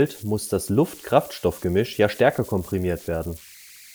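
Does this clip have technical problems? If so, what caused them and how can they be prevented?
Yes. An undithered delta-sigma converter settled into repeating bit patterns, producing converter idle tones: a tone around 2 kHz, about 23 dB below the speech, throughout. Adding dither to the converter's input prevents this.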